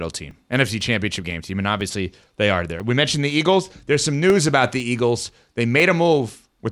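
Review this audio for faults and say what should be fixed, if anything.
Periodic USB or driver dropouts run from 0.31 s to 6.3 s, one every 0.5 s. Each gap is about 2 ms of silence, so the speech carries regular small ticks. A background task is stalling the USB bus or driver on a fixed schedule. Fix it by disabling USB power saving and finding the periodic task that blocks the audio driver.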